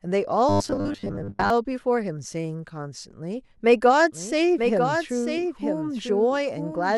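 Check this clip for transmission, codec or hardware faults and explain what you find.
Two faults are audible in this speech.

Robotic sound from repeated short buffers, 0.49 to 1.50 s: audio likely arrived too seldom, so playback kept looping a 10 ms slice while most real signal was skipped. The loop imposes a fixed 100 Hz buzz, making the voice rigid and metallic.

Doubled audio track, 4.12 s to the end: a full-band copy about 5 dB quieter trails by roughly one second, likely captured again by a slower path. It has no decay or room colour and cuts in abruptly.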